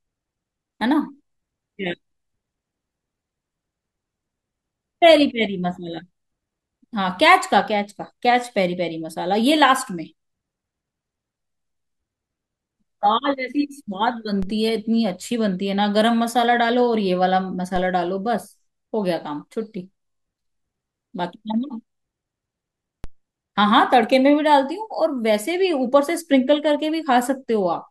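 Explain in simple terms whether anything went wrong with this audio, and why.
Three times in this speech recording, at 14.43, 17.76 and 23.04 seconds, the baseline of the signal suddenly shifts. This fault is called a DC step. Each shift is heard as a short low thump, while the speech itself carries on unchanged. The cause is an abrupt offset in the signal's zero line, the kind of jump a converter or input stage can produce. Here each offset fades away within a fraction of a second rather than holding.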